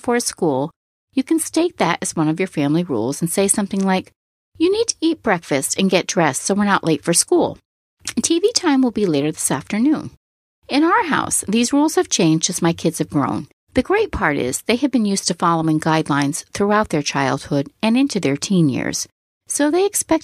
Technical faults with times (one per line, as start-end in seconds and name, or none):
none